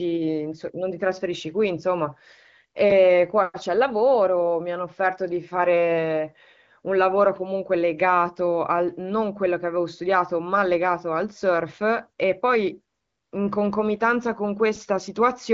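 No technical faults are audible in this speech.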